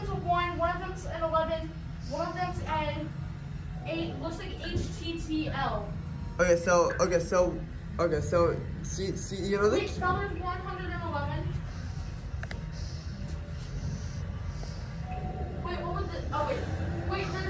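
Nothing here trips the ear at all; there's not a single technical fault to point to anywhere in the clip.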